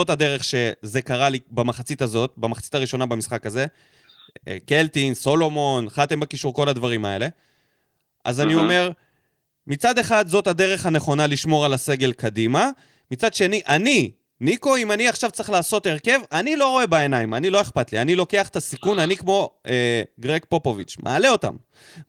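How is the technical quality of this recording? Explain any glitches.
No glitches or faults are audible in this recording.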